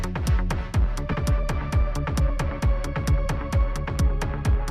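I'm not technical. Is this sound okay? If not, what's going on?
No. There are two problems, one right after the other.

At about 1.11 seconds there is a skip ahead. Roughly a second of the sound is simply missing. It was lost on its way to you, or thrown away because too much audio had piled up waiting to play. Playback jumps straight to later material with no silence in between. The two sides are stitched together almost directly, so the sound seems to lurch forward.

Right after that, from about 1.23 to 3.26 seconds, there is a jitter buffer speed-up. The receiving end was holding more audio than it wanted, so it tried to catch up. It did this by cutting out many tiny slivers, each shorter than you could notice alone. Together they add up to about a tenth of a second. The sound plays about 5% faster but keeps the same pitch, so it can feel slightly rushed.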